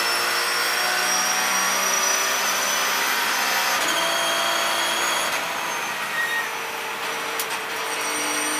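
No technical faults can be heard anywhere in the recording. The audio runs without any interruption, disturbance or change that would point to a problem in how it was captured or delivered.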